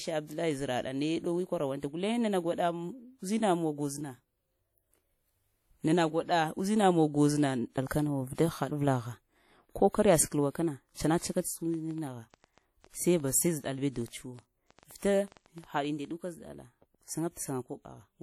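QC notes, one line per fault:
throughout: WMA compression, plainly audible and likely from a low-rate transform encode; the damage fits a bitrate near 48 kbps. Quantisation noise spread across long blocks gives a washy, ringing texture, with hiss that swells and recedes with the speech. Nothing sounds above 20.1 kHz.
11.23–16.12 s: train of clicks, about thirty similar pulses at an irregular pace averaging 6.55 per second, peaking at roughly the speech level. They tick over speech and pauses alike; the likely cause is interference from nearby equipment or a faulty connection or power supply injecting repeated pulses.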